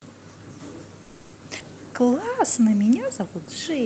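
At 1.03 s the speech stops moving forward and the last sound carries on as a fading buzz for about 300 ms, until 1.35 s. Then it picks up exactly where it left off, with nothing lost and the whole thing pushed about 300 ms later. That's a call audio freeze. The likely cause is packets getting held up on the network, so the jitter buffer ran dry and the receiver stretched out the last bit of audio to fill the hole.

Shortly after, at about 1.6 s, it goes the other way, a skip ahead. A chunk of roughly 70 ms is simply gone, and the two sides are butted together with only a tiny 10 ms bridge. It sounds like a small jump or a clipped fragment. Audio went missing in transit, or the buffer dumped some to catch up, and the delay drops by about 50 ms as a result.

From 2.01 s to 2.72 s there's a jitter buffer slow-down. The buffer was running short, so it repeated single pitch cycles and little slices of pause to rebuild its reserve. 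That adds 51 ms in total and brings playback to 94% speed. The pitch stays put, but sounds drag a bit and there can be a faint warble. All of this sits on an Opus call path, which cuts the top end off at 8 kHz and adds coding texture consistent with a bitrate around 24 kbps.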